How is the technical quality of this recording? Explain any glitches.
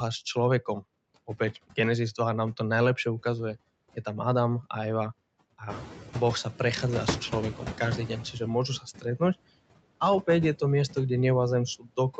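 The recording's quality is limited by the call's noise suppression, which leaves audible traces throughout and stumbles at three points.

Noise suppressor artifacts, whole clip: the suppressor estimates the steady background in each frequency band and pulls it down frame by frame, here by about 20 dB. Because the reduction changes from frame to frame, the leftover noise sinks in the gaps between words and swells back up underneath the speech.

Noise suppressor catching up, 5.69 to 6.48 s: the room noise jumps by about 16 dB just before this, around 5.5 s, and the suppressor's noise estimate lags behind the change. For about 0.79 s the background comes through louder, cut by only about 10 dB instead of the usual 20. It then settles down as the estimate adapts to the new level.

Speech cut by the noise suppressor, 8.79 to 9.21 s and 11.79 to 11.98 s: in these two spots the suppressor mistakes parts of the speech for noise and turns them down along with the background, by as much as about 15 dB. 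Only a fraction of a second of speech is affected each time, but the quieter sounds within it come across as swallowed or faint.

Nothing is heard above 8 kHz, which fits the band limit of the Opus call codec.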